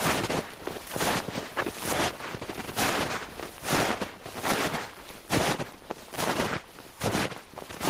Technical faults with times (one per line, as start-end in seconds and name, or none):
0.00-7.89 gain pumping